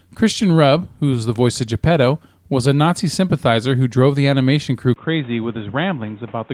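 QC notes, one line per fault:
4.94–6.54 s, input switched to a poorer device: a 20 ms gap after "drove the animation crew", then dull, boxy sound. Nothing above 3.8 kHz. About 5 dB quieter, with faint new background noise. Likely a change to a narrower-band microphone.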